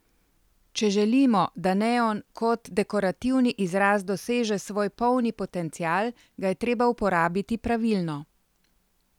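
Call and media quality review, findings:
No faults found in this speech recording; nothing to trace to any component.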